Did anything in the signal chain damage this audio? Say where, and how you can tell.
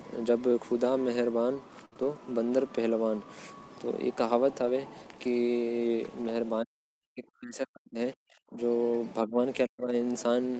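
Yes. Burst of packet loss, 1.85 to 1.94 s, network stage: about 60 ms never arrived, so the receiver stretched and faded the last sound before resuming past the gap.

Short concealed packet loss, 1.94 to 1.97 s, network stage: another 20 ms hole was filled by continuing the preceding sound, leaving a brief smear.

Lost packet rebuilt from error correction, 1.97 to 2.07 s and 4.65 to 4.71 s, codec stage: Opus played low-bitrate backup copies, so the audio continues without a gap but sounds rougher and noisier.

Speech suppressed in double talk, 6.63 to 8.59 s, 9.22 to 9.38 s and 9.67 to 9.94 s, call processing: the level drops by up to about 40 dB, likely the echo canceller ducking during simultaneous talk.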